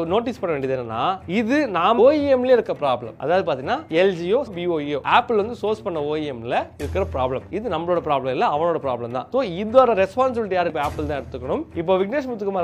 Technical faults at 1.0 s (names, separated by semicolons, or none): none